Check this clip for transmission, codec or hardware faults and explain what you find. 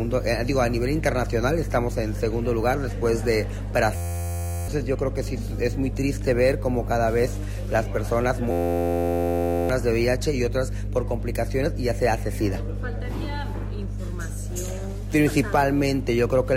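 Two faults are present: a continuous hum and two freeze episodes.

Mains hum runs throughout the clip. A ground loop or nearby transformer is leaking the 50 Hz power line into the signal, adding a steady low drone with low harmonics. It is strong, sitting only slightly below the sound itself.

System hang loop occurs from 3.96 to 4.68 s and from 8.51 to 9.69 s. The machine stalled while the audio hardware kept replaying one 11.61 ms chunk, which fits a 512-sample buffer. The result is a flat buzz at 86.1 Hz, with about 0.7 s and 1 s of audio lost.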